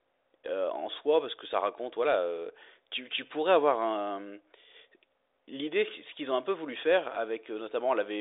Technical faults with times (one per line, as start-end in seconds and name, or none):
none